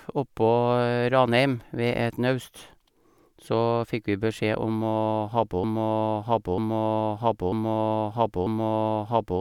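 From 5.64 s to the end, a broken-record loop replays one 0.94 s speech fragment four times, likely from a stalled stream, and the continuing speech is lost.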